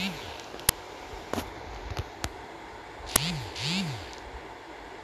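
Speech, interrupted twice by an uninitialised buffer fault, at 0.69 s and again at 3.16 s. Each event is a brief, loud crack lasting about 5 ms, which fits one playback block being sent out before any audio had been written into it. The output stage read whatever stale values remained in that memory and played them as samples, so each burst sounds unrelated to the surrounding speech.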